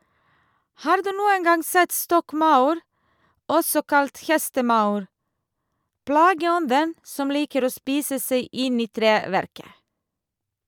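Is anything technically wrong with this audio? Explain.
No, nothing is technically wrong with this audio.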